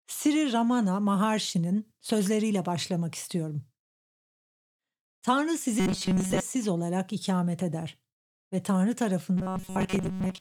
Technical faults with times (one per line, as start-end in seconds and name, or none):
5.80-6.41 robotic sound from repeated short buffers
9.37-10.40 robotic sound from repeated short buffers